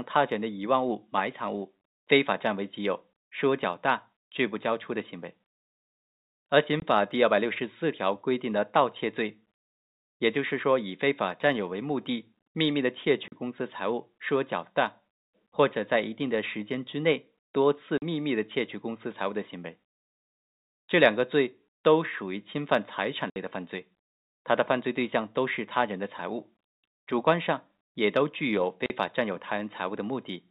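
Packet loss filled with silence cuts hard-edged gaps at 6.80–6.82, 13.28–13.32, 17.98–18.02, 23.30–23.36 and 28.86–28.90 s. The gaps are 20, 40 or 60 ms long, which fits whole 20 ms packets replaced by silence.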